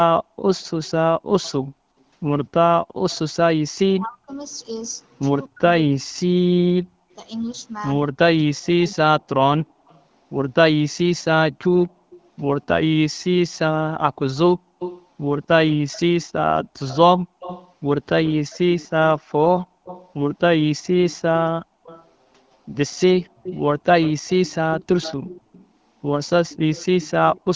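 A far-end loudspeaker's echo canceller likely let its pickup through, so an echo leak at 3.1 s adds a faint copy of the speech, delayed 245 ms and about 25 dB down. From 3.24 to 9.0 s, while both sides talk at once, the canceller likely mistakes this talker for echo; this speech suppression in double talk pulls the speech down in pieces, very deeply at worst, for about 2 s in total. The same echo leak returns with the same 245 ms lag at 9.87 to 10.0 s at about 35 dB down and at 11.76 to 12.21 s at about 25 dB down. From 14.34 to 27.41 s it becomes a long delayed copy only about 15 dB below the speech.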